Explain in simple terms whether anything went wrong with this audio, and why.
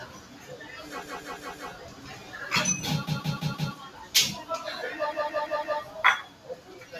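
Yes, a few things went wrong, and each can be heard.

Three times the audio catches and stutters, at 1.02 to 1.71 s, 3.07 to 3.76 s and 5.12 to 5.80 s. Each time, one short piece, about 0.17 seconds long, plays five times in a row with a hard join between each play. This is a repeated buffer. The playback device ran out of fresh audio, so it played the last small chunk it had again until new sound arrived. Those chunk lengths fit an 8192-sample buffer.

Across the whole clip, the level swells and sinks. Held sounds and fading tails get thinner, while sharp starts come through more clearly. This is a noise suppressor applied to music or sounds. The tool was built to clean up speech, so it treats steady, lingering sound as background noise and keeps turning it down.

That same tool pushed some moments down more than the rest. Listen at 0.06 to 0.54 s, 1.82 to 2.33 s, 3.89 to 4.14 s and 6.25 to 6.93 s. 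There the sound dips. This is sound cut by the noise suppressor. It mistook those stretches for noise and quieted them more heavily than the surrounding audio.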